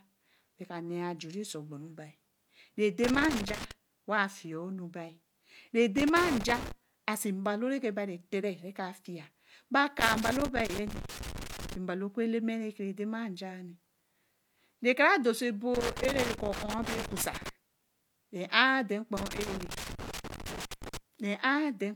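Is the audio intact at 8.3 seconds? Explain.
Yes, at 8.3 seconds the speech plays through cleanly, with no dropout, click, distortion or other fault at that moment.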